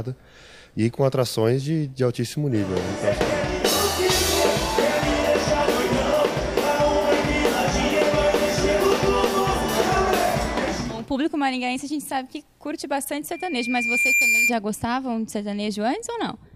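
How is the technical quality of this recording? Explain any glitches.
One glitch spoils the recording: a loudspeaker feedback squeal from 13.32 to 14.54 s. A microphone is picking up the loudspeaker it feeds, and at 2.4 kHz the loop gain exceeds one, so that frequency keeps reinforcing itself. It swells over most of a second into a piercing tone that ends up a few decibels louder than the rest of the sound.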